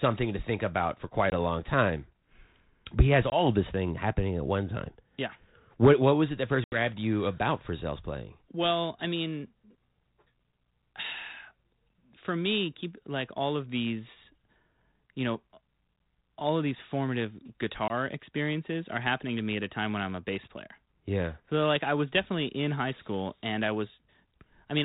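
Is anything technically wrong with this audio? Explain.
Yes, there's packet loss on an ADPCM call. Short hard-edged silent holes land at 1.3 s (between "to think about for" and "a long time"), 3.3 s (after "but he has"), 6.64–6.77 s, and 17.88 s (after "all of these formative"). Most drop about one packet, while the 6.64 s gap loses about four. The decoder's adaptive predictor and step size slip out of step with the sender's, so the speech comes back slightly distorted, at times with a click or at the wrong level. It settles within a few tens of milliseconds.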